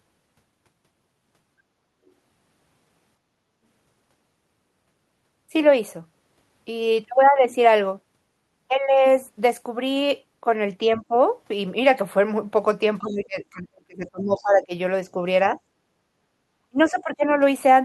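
At 10.86 to 11.14 s the speech dips briefly, by roughly 10 dB over a fraction of that span. This is speech suppressed in double talk, most likely because the echo canceller heard the far end playing at the same moment and turned the whole microphone signal down rather than risk passing echo. The same thing happens far more heavily from 13.0 to 14.73 s, where the speech sinks by around 30 dB for roughly one and a half seconds. It returns lightly at 15.06 to 15.18 s with a shallow dip of a few decibels, and again from 16.69 to 17.24 s, where the drop is deep, around 25 dB. What separates this from ordinary level riding is that the talker's own voice is what gets chopped, and only while the other side is active.

Inside the long suppression, at 13.04 to 13.15 s and 14.35 to 14.43 s, faint scraps of a second voice come through, roughly 30 to 35 dB below the talker. This is the other side's voice leaking through, likely residual loudspeaker echo that the canceller failed to remove. 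These are brief fragments of a different voice rather than a loss of the talker.

From 15.86 to 16.41 s the room tone itself drops by about 15 dB for about half a second and then comes back. This is background gated by the echo canceller, which clamped the microphone while the loudspeaker played. Unlike the double-talk suppression, here it is the ambient sound that vanishes, not the talker's speech.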